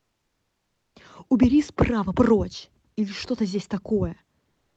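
A speech recording, carried over a call codec that limits the band to about 8 kHz. From 4.51 s to the end at 4.76 s, the real background is replaced by comfort noise. A steady, featureless hiss sits in place of the room sound, about 1 dB quieter. The background already lies about 55 dB below the loudest speech. The likely cause is Opus discontinuous transmission: the sender stopped sending audio during the pause, and the receiver filled it with synthetic noise.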